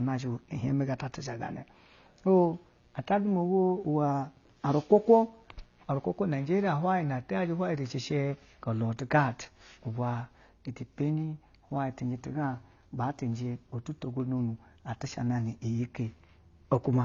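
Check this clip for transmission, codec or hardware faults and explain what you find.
Two faults are present in the speech. Throughout, nothing sounds above 7.1 kHz, with smeared low-bitrate texture, likely low-bitrate audio saved at a high bitrate: an earlier lossy encode's losses persisting inside a larger MP3. Unlike a simple low-pass, coding artefacts remain. From 0 to 6.6 s, mains buzz at 60 Hz sits roughly 40 dB below the speech. Switching spikes add raspy harmonics, unlike smooth sinusoidal hum.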